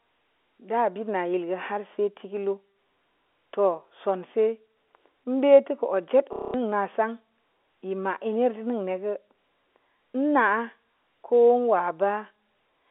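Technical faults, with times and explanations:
6.33–6.54 s, packet loss with last packet repeated: for about 210 ms the receiver, receiving nothing new, kept replaying the last packet it had. Each replay restarts the same fragment without regard to the pitch period, and the run forms a buzzy, robotic stutter at roughly 33 Hz, which fits seven lost 30 ms packets. The G.711 telephone band, about 300 Hz to 3.5 kHz, carries the repeated fragment unchanged.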